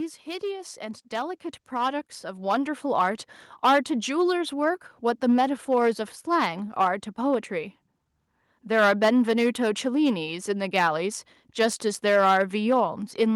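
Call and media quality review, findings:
Hard clipping, throughout. Speech peaks driven about 9 dB past the ceiling of a converter or level stage, tops cut flat; a small share of samples, around 2 percent, flattened. Crackle and harsh edge on louder syllables from added high harmonics.

Automatic gain rising, 0.24 to 3.27 s. AGC judged input too quiet and ramped gain up about 11 dB over roughly three seconds. Speech and background noise swell together.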